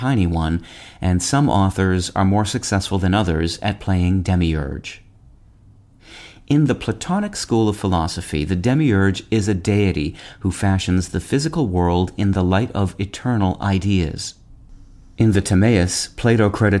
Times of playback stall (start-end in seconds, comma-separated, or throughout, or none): none